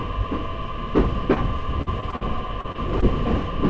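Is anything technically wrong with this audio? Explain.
Yes. There are two kinds of network fault.

Short concealed packet loss occurs at 1.34 to 1.38 s, 2.61 to 2.66 s, 2.72 to 2.76 s and 3.00 to 3.04 s. Each time, roughly 20 to 40 ms of audio failed to arrive. The receiver extended the preceding sound to cover the hole and then blended back, which leaves a brief smear or wobble. Unlike the robotic stretch, each of these is a single isolated patch.

Repeated packet loss (robotic sound) runs from 1.82 to 2.23 s. Four gaps, the longest about 46 ms, were patched in quick succession, so concealment fills around a third of that span. The repeated synthetic fill gives a choppy texture with pieces missing, not one momentary blur.

The audio also passed through a call path. Nothing is present above 8 kHz, which fits the G.722 codec at 64 kbps.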